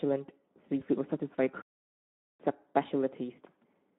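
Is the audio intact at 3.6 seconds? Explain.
No. The Speex codec affects the whole clip, including 3.6 s. This CELP speech coder has too few bits for the excitation, which fits a bitrate near 11 kbps. Speech sounds plainly noisy and hoarse. The band runs only from 200 Hz to 3.6 kHz.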